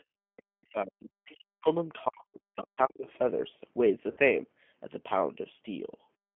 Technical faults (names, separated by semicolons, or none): G.729 codec; other side's voice leaking through; speech suppressed in double talk; VoIP packet loss concealed by the speech codec